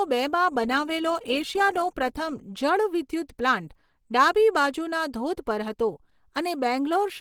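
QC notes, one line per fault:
throughout: Opus compression. The speech was likely squeezed through the Opus codec at a low bitrate in its hybrid mode. In that mode a speech coder carries the lower band and a transform coder fills the upper band, mostly with folded or noise-like energy. The damage is plainly audible: the speech sounds muffled and hoarse in its body and grainy higher up, though content still extends to 20.2 kHz. The coarseness fits a rate around 16 kbps.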